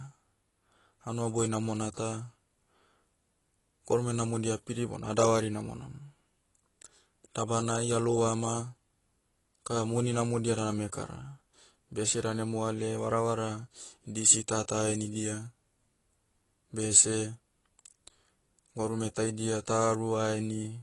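Right through the speech there's a hard ceiling at 11.5 kHz and a dull, smeared quality, with a fizzy, warbling edge on sibilants. That's likely AAC compression at a low rate, which fits roughly 32 kbps, thinning the spectrum and cutting the top.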